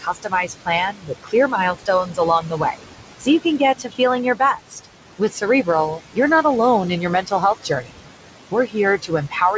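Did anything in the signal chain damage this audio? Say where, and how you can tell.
Yes. In call processing, the noise suppressor pulls the room noise, about 11 dB below the speech, down by about 18 dB frame by frame. The leftover noise pumps, sinking between the words and rising under them.

The same suppressor mistakes speech for noise at 0.0–4.0 s (roughly a second and a half affected, dips of about 18 dB), 4.35–4.86 s, 5.19–6.44 s, 7.01–8.11 s and 8.51 s to the end. Soft consonants and endings sound swallowed.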